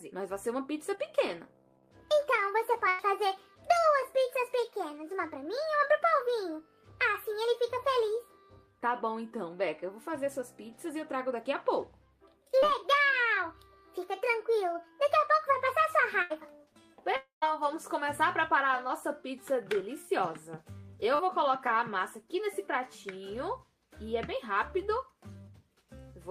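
At 0.95 s, a short concealed packet loss: about 20 ms of audio never reached the decoder in time, and the receiver bridged the hole by extending the preceding sound for about 15 ms before blending back into real audio. It comes across as a tiny smear or wobble. The same fault recurs at 12.59 s (about 40 ms missing), 18.88 s (about 20 ms) and 21.15 s (about 40 ms).

From 2.89 to 3.01 s comes a burst of packet loss, with roughly 100 ms lost across consecutive packets. Concealment stretched the last sound across nearly all of that gap and faded it, so a held buzz or thinning hiss replaces the material. Playback then resumes further on, and whatever fell in between is simply absent. A second burst from 16.22 to 16.32 s loses about 80 ms and has the same held, decaying quality.

From 17.16 to 17.44 s, the likely cause is a long network dropout, with about 260 ms of audio that was never played. 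The receiver's extrapolation carries the previous sound forward and fades it away. The final 120 ms or so is plain silence before the audio returns at a later point, with that stretch missing.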